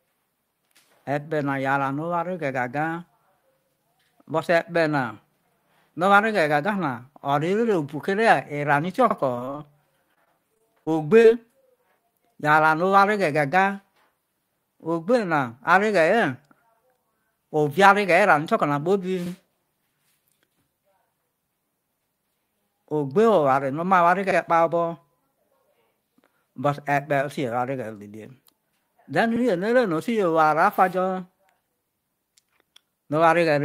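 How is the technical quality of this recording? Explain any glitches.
The speech has two kinds of glitch, both from how the audio was processed or delivered: three short stutters from overlapping chunks, and two stretches of robotic sound from repeated packet loss.

Overlapping chunks occur at about 9.11, 24.31 and 29.36 s. Each new block of audio started before the previous one had finished, so at every join about 50 ms of sound plays twice. The spacing of the later joins points to roughly 5-second chunks. Each join is heard as a brief click or stutter where a sliver of speech repeats.

Repeated packet loss (robotic sound) affects 9.35 to 9.60 s and 10.14 to 11.26 s. Pieces of the stream kept arriving late or not at all, and each hole was patched by stretching the sound just before it. In the first stretch about 60 ms is missing and about 43% of the span is patched. In the second, about 100 ms is missing across a longer span. 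The longest gaps are 29 ms and 25 ms. The speech turns choppy and robotic, with small pieces dropped out.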